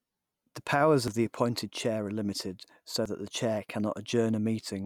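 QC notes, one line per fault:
1.08 s and 3.06 s, audio missing between chunks: a jump of about 20 ms just before "the appointed chair" and between "limited so" and "that the chair", about 2 s apart, likely from chunk-boundary loss. The waveform and spectrogram show an abrupt seam with no gap.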